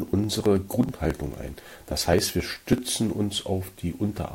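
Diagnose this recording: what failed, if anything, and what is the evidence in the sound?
Periodic USB or driver dropouts affect the speech from 0.08 to 2.78 s, heard as evenly spaced ticks every 54 ms. At the driver or USB stage, a recurring stall skips roughly 10 ms of audio each time, about fifty times, splicing the speech together with an audible jump.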